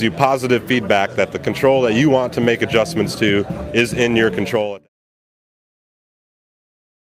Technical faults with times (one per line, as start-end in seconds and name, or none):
none